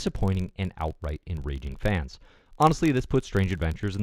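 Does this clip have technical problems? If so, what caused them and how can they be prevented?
Yes, there's a filter restarted on every block, running the whole clip: each block starts from zero state, so you get a little transient every time, a buzz of about 43 Hz that rises and falls with the speech, which fits a 1024-sample block. Fix it by carrying filter state across blocks.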